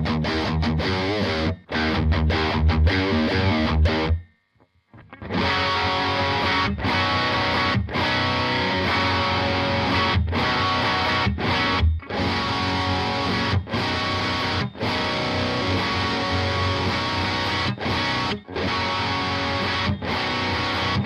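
The audio has two brief faults caused by damaged data in a compressed stream. The first runs from 3.88 to 3.90 s. The second is a 10 ms blip at 18.67 s. At these points the compressed bytes were corrupted. The decoder could not read the affected frames cleanly. It lost sync and had to search for the next valid frame header before normal playback resumed.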